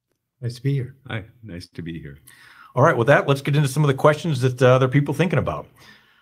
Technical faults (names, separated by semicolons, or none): short stall from a late packet